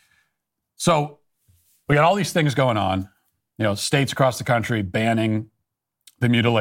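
No dropouts, clicks, distortion, level jumps or other defects can be heard in this speech at any point.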